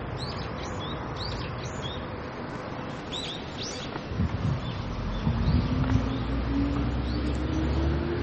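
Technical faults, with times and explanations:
Throughout: MP3 compression. Nothing is heard above 8.4 kHz, and the damage is plainly audible. The top is cut off abruptly, and the remaining detail has a watery, swirling quality as weak frequency components drop in and out from frame to frame. The likely cause is a lossy encoder starved of bits, which fits a low rate around 32 kbps. Unlike a plain low-pass filter, the sound under the cutoff churns as well as dulls.
2.23 to 4.07 s: filter restarted on every block. A steady buzz at about 345 Hz rides on the audio and rises and falls with its level. The filter drops its memory at each block boundary and starts again from silence, so every block opens with a tiny transient. That rate fits a 128-sample block. Unlike a fixed-pitch hum, it tracks the sound's loudness and stops when the section ends.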